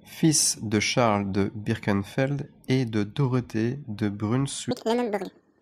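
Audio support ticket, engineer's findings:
4.71 s to end: speech at exactly 2x, one octave up. Audio read two samples at a time; frame width misread. Exact 2x ratio, not clock drift.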